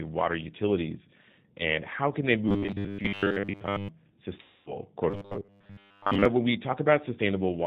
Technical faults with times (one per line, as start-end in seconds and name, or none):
0.00-7.67 G.729 codec
2.49-3.89 robotic sound from repeated short buffers
4.42-4.77 VoIP packet loss concealed by the speech codec
5.10-6.25 robotic sound from repeated short buffers